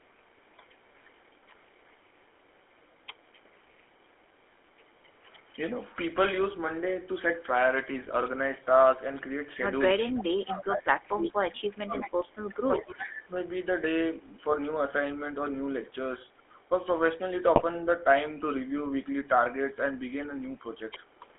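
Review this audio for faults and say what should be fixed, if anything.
The whole clip goes through the GSM full-rate codec. The band runs only from 300 Hz to 3.4 kHz. The speech has a buzzy, gravelly roughness, which fits the 13 kbps full-rate coder and its coarse excitation. To prevent it, carry the call on a wideband codec end to end.

An echo leak returns the speech about 362 ms late. It is heard from 0.0 to 5.82 s, 10.47 to 13.09 s, 16.38 to 16.66 s, and 21.07 s to the end. It is faint in most stretches and much stronger from 10.47 to 13.09 s. The likely cause is a loudspeaker on the far side whose echo canceller let its own playback back into the microphone. To prevent it, use a headset or fix that echo canceller.

GSM bit errors break the speech from 8.02 to 8.13 s and from 17.55 to 17.64 s. Each burst is brief and sounds like squawks, pops and gargling. Corrupted filter, pitch or gain values reached the decoder and warped several frames. 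To prevent it, improve radio coverage or conceal frames that fail their checks.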